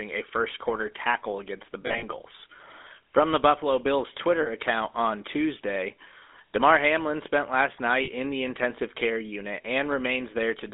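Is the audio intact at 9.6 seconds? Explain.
No. From 9.62 to 9.65 s, just after "the intensive care unit", a brief rough, metallic ring holds the sound: lost GSM frames, one dropped 20 ms frame concealed by repeating the last good frame. Under it, the GSM full-rate codec gives a plainly audible buzzy, gravelly roughness, consistent with 13 kbps, from pulse-driven vocal-tract modelling within a 250 Hz to 3.6 kHz band.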